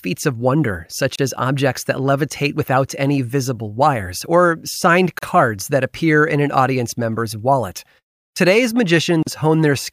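At 1.16, 5.19 and 9.23 s, a gap at a join of encoded pieces inserts 30 to 40 ms of silence, spaced every 4 s. Speech resumes exactly where it stopped, unlike a dropout.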